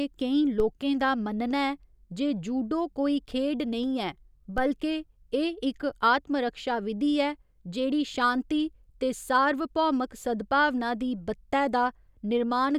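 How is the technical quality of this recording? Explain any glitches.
Two DC steps mar the recording, at 0.60 s and 4.58 s. At each moment the waveform's zero line suddenly jumps by about -23 dBFS. It then drains away slowly, as if through a 5 Hz high-pass. That sudden shift in baseline carries energy far below the speech band. You hear it as a brief low thump or click. The speech carries on unchanged through both events. Each thump is a separate, sharp event.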